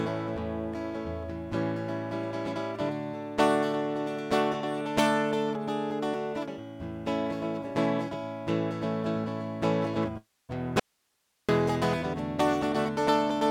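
A music clip, broken up by two faults close together. A long network dropout, likely from packets that never arrived, hits from 10.17 to 10.51 s: the receiver stretches the last sound into a fading buzz or hiss, then falls silent before the music resumes with that stretch missing. An audio dropout to a faint residue follows from 10.80 to 11.49 s, likely a signal path losing its input while staying live: the music cuts out abruptly for about 0.69 s, leaving only hiss roughly 45 dB below the music.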